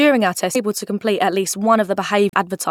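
At 0.54 s a brief glitch cuts through the speech. This is damaged data in a compressed stream. Some of the encoded bytes are wrong, so the decoder misreads that frame and loses sync. It then hunts for the next valid frame header. A second, longer burst of the same fault runs from 2.29 to 2.34 s. It lasts about 50 ms.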